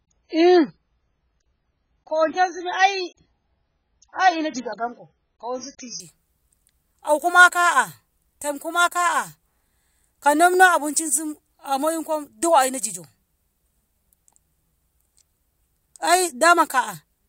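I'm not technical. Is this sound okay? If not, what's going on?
No. For the first 6 seconds this speech sounds muffled and a bit smeary, with nothing above about 6.8 kHz. That's an adaptive stream starting at a low bitrate: the player begins on a rough version to start fast, then switches to a clearer one at 6.0 s, with no gap.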